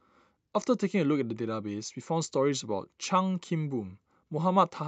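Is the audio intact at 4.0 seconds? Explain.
Yes, the speech at 4.0 seconds is intact, with nothing there beyond the ordinary sound of a WebRTC call path running normally.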